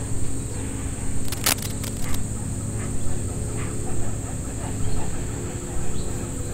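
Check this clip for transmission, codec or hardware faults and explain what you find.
One hardware fault is present. From 1.25 to 2.15 s, cable scratch noise: dense, uneven rustling bursts only a little below the sound, likely from a worn connector changing resistance, not the isolated clicks of a dropout.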